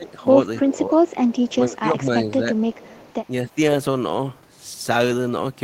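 A speech recording with two call-path faults. The voice dips by about 10 to 15 dB at 0.0 to 0.09, 0.62 to 1.03, 1.45 to 2.51 and 3.44 to 3.57 s, likely speech suppressed in double talk, where the canceller turns the near voice down. A faint delayed copy trails the speech by 258 ms, about 25 to 30 dB down, at 1.07 to 1.49 and 2.55 to 3.28 s. This is likely echo leak, with echo slipping past an incomplete canceller. Suppression removes level, while leak adds a repeated copy.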